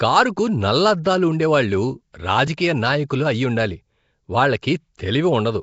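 From start to end the speech carries a rough, hissy halo and a smeared, underwater blur, with nothing above 7.7 kHz. That is likely Nellymoser compression, consistent with about 32 kbps. Its starved bands are refilled with noise, giving hiss rather than MP3's hollow, swirling warble.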